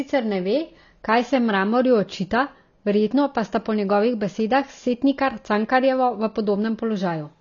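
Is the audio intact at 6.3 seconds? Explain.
No. At 6.3 seconds the speech sounds dull and smeared, with nothing above 7 kHz and a plainly audible warbling, fizzy texture on sustained sounds and sibilants. This is AAC compression, present throughout the clip rather than at that moment alone, and likely caused by AAC-LC coding at a low bitrate, which fits about 24 kbps. Short of bits, the encoder drops the high band and quantises the remaining spectrum coarsely.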